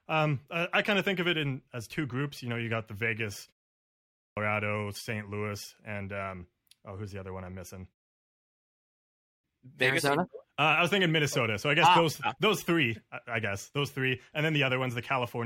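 At 3.86 s and again at 8.90 s, speech bursts abruptly out of silence with its opening missing: a clipped start after a pause. About 0.51 s is swallowed at 3.86 s and 0.54 s at 8.90 s, after pauses of 0.42 s and 1.04 s, because the output device slept and had to wake before playing.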